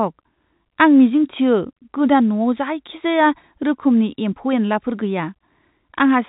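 No technical faults occur at any point in the speech, which is carried over G.711 telephone coding at 64 kbps.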